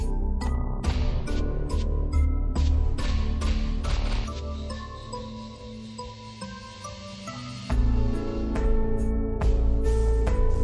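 From start to finish the audio plays at half speed and sits a full octave, 12 semitones, lower than it should. This is the wrong sample rate fault: samples are clocked out at a slower rate than they were captured at, with no conversion, which fits audio recorded at 44.1 kHz being played at about 22 kHz. Unlike a pitch shift or a time-stretch, where one property changes alone, here speed and pitch move together by exactly the same ratio.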